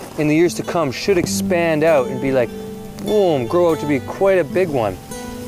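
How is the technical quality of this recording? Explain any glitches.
There is one glitch, a single click at 1.98 s. The likely cause is dropped samples: a handful of samples, a tenth of a millisecond or so, went missing from the stream, so the waveform jumps straight from one value to a later one. That gap is far too brief to remove any audible sound. What it leaves is a sharp click, which shows up as a thin vertical line across the whole spectrum at that moment.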